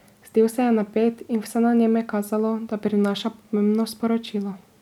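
No technical faults can be heard anywhere in this speech recording.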